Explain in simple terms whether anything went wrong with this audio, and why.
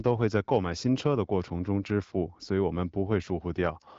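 Nothing went wrong: the speech has passed through an HD Voice (AMR wideband) phone link, which carries nothing above about 7.5 kHz, and the link is working as designed at the quality setting used.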